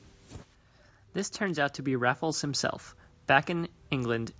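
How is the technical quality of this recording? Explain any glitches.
The recording has one glitch, an automatic gain rise partway through the speech, heard through call-style microphone processing that leaves nothing above 8 kHz. From 1.46 to 2.7 s, the automatic gain control judged the input too quiet and stepped its gain up gradually by about 4 dB over roughly a second and a quarter. Because the gain acts on the whole signal, the voice and the background noise swell together, so the room seems to creep closer rather than the speaker simply getting louder.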